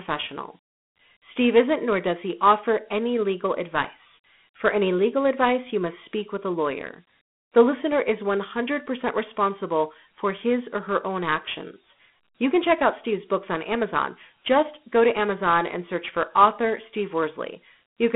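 Throughout the speech, Dialogic VOX ADPCM coding leaves nothing above 3.9 kHz, a 200 Hz to 3.5 kHz telephone band, and a plainly audible gritty hiss riding each syllable, consistent with 32 kbps.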